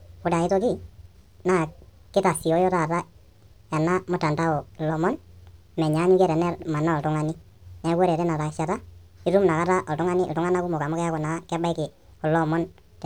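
Speech, running fast and high from start to finish. The fault is a wrong sample rate. Everything plays 1.5 times too fast, and pitch rises by about 7 semitones with it. That ratio fits audio recorded at 32 kHz being played back at 48 kHz without conversion.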